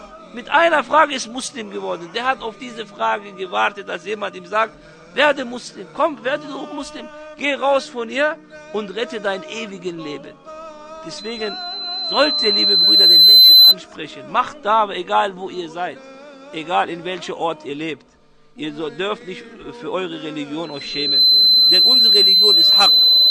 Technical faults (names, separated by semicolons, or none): loudspeaker feedback squeal